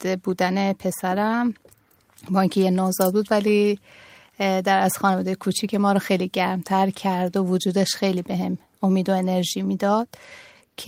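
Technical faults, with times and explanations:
No technical faults are audible anywhere in this speech recording.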